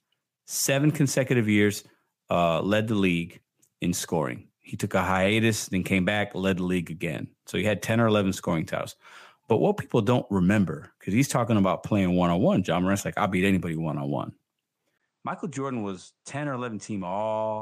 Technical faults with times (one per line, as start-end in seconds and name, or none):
14.98-17.61 input switched to a poorer device